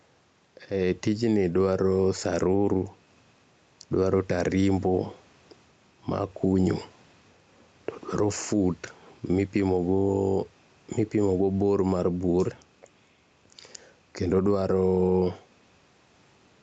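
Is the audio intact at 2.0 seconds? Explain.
No. At 2.0 seconds, as across the whole clip, the speech shows gain pumping. The gain swings by around 5 dB, ducking under every loud syllable, so soft and loud parts sit squashed together. The likely cause is input gain set too high, with a fast limiter or compressor clamping down on each peak. Unlike a noise gate, which cuts the gaps to silence, here the gain rises again between phrases.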